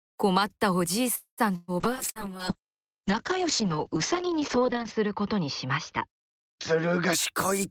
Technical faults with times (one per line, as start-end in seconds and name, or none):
1.15-1.41 call audio freeze
1.56-1.71 burst of packet loss
1.84-7.19 call bitrate drop
2.10-2.18 burst of packet loss